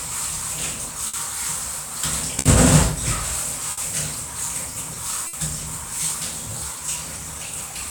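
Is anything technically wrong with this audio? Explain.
Yes. Clock drift between sender and receiver runs through the whole clip: the sending clock runs roughly 5 percent slow, so the receiver's jitter buffer keeps draining. This produces small, unevenly spaced timing hiccups from start to finish rather than one isolated glitch.

Short stalls from a late packet occur at 1.07–1.15 s, 2.39–2.47 s, 3.71–3.79 s and 5.27–5.35 s. Each time the buffer ran empty, the receiver held the last sound for about 60 ms until the packet arrived, then resumed where it left off. Nothing is lost, but each moment is briefly smeared, with a faint buzz or dip.

Repeated timing corrections run from 4.74 s to the end. To stay in step with the slow sender, the receiver keeps repeating short slices, all in the same direction, stretching playback to about 97 percent speed and adding roughly a tenth of a second overall. 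At most this is heard as a slightly dragging, unsteady tempo.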